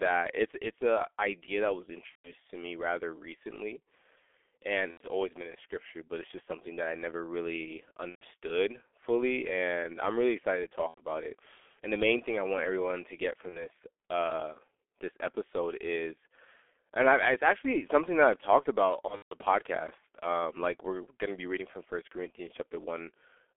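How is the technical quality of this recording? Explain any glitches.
Quality is poor: the speech carries heavy codec damage throughout and six brief dropouts.

G.723.1 codec, throughout: low-rate frame coding, fitting roughly 6.3 kbit/s, limits the band to 300 Hz–3.4 kHz, leaving speech muffled, hoarse and smeared at consonants.

VoIP packet loss concealed by the speech codec, at 2.09–2.33, 4.91–5.04, 8.09–8.23, 10.88–11.00, 13.50–13.66 and 19.07–19.33 s: the decoder extrapolates lost frames, giving fading buzzy or noisy stretches and weak recovery.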